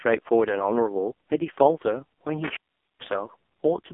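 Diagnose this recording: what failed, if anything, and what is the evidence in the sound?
AMR narrowband mobile codec, throughout (codec stage): heavy buzzy, synthetic damage that fits the lowest 4.75 kbps mode, with a 250 Hz to 3.4 kHz line band and nothing above 3.5 kHz.

Intermittent contact, 2.44 to 3.12 s (analogue wiring): a loose connection opens for about 431 ms, cutting the speech out with crackle at the break and reconnection.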